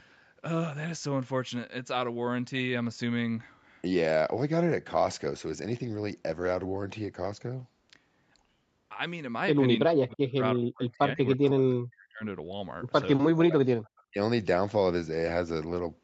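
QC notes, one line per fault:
9.85 to 12.23 s and 13.33 to 14.18 s, speech suppressed in double talk: the speech sinks and breaks into pieces, at its deepest falling by roughly 40 dB, for about two seconds in the first stretch and most of a second in the second. It's likely the far end talking over it, with the echo canceller unable to tell this talker from its own loudspeaker echo, so it clamps down on everything at once.
11.45 to 11.49 s and 13.86 to 14.02 s, echo leak: short, faint scraps of a delayed copy sit behind the signal, 326 ms late, about 25 dB under the speech in the first and about 40 dB under in the second. That points, likely, to a speakerphone end whose canceller didn't fully scrub what its mic picked up, so bits of the returning audio got sent back down the line.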